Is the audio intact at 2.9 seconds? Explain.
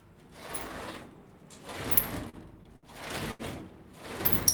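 No. Repeated stalls (stutter) run from 2.29 to 3.42 s. Late packets drained the jitter buffer five times, so the sound is stretched, not lost, and stutters.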